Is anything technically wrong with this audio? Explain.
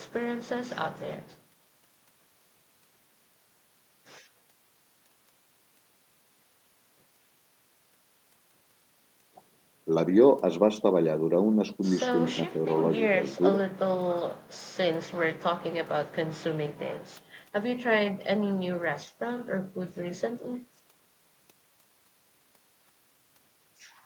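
No, the speech signal shows no technical faults anywhere in the recording.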